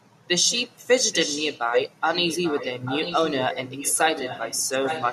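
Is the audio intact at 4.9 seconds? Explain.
No. From 4.84 s to the end of the clip there is an echo leak. The likely cause is a far end on a loudspeaker whose echo canceller let part of the returning signal through its microphone and send it back. At 4.9 s a copy of the speech trails the original by about 835 ms, only a little quieter than the direct sound, so two overlapping, out-of-step layers of the same speech are heard.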